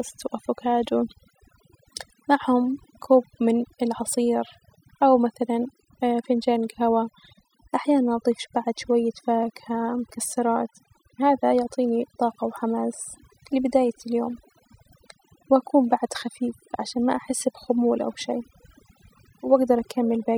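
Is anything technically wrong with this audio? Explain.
Yes. The speech recording suffers from overdone noise removal, present from start to finish. A noise reduction process was pushed too hard, so any frequency band sitting close to its noise estimate is pulled sharply down or switched off. Quiet components of the voice fall below that threshold and are removed along with the noise. The result is a lowered background scattered with twinkling, chirpy specks.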